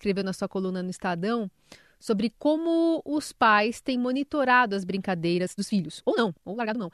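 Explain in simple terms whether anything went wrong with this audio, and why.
From 5.31 s to the end, the speech abruptly runs twice as fast while its pitch stays the same, sounding rushed. This is a time-stretched section: software likely squeezed that part to fit a length, dropping short pieces to keep the pitch.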